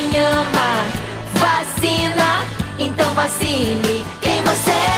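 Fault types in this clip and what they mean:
No fault types are present in this clip.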